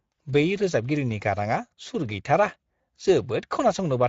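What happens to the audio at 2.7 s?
Speex codec damage is present at 2.7 s, as it is across the whole clip. This CELP coder rebuilds speech from a vocal-tract model and a coarsely coded excitation, and the sound suggests a mid-range setting near 17 kbps. The result is a plainly audible rough, hoarse grain.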